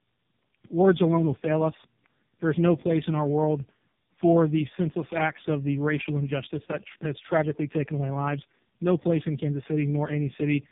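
From start to end, the speech suffers tandem speech coding. The sound points to two AMR-NB mobile coders in a row, with a standard telephone link between them. The second coder re-encodes the first one's damaged output. Voices turn rough, warbly and muffled. Nothing reaches above 3.7 kHz.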